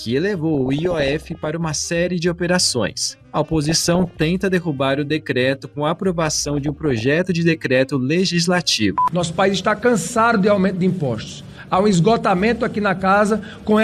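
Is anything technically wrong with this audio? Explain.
Yes. Three bursts of DAB burbling occur, from 0.55 to 1.48 s, 3.64 to 4.23 s and 6.20 to 7.06 s. Weak reception lets bit errors, around 0.7 to 1 percent, slip past the error correction into the MP2 audio data. Corrupted samples put short blips of noise in single sub-bands, and corrupted scale factors make sub-bands jump in level for up to a frame, which fits 25 to 42 damaged frames per burst. The result is burbling noise blips and sudden sub-band level jumps over the sound.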